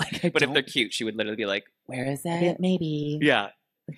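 No technical faults turn up anywhere in the clip, so there is nothing to describe in time order.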